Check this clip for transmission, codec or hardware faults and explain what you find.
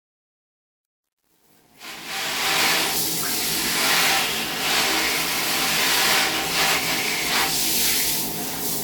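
One fault is present, in the opening fade-in. From 0.0 to 2.63 s there is truncation distortion on the fade, worst from 0.0 to 2.17 s. The gain stage keeps too few bits without dither, which fits a 9-bit path, so the quiet start collapses into coarse square steps. It sounds gritty. On a waveform the low-level section looks stair-stepped. A spectrogram shows harmonic hash instead of a clean, rising fade.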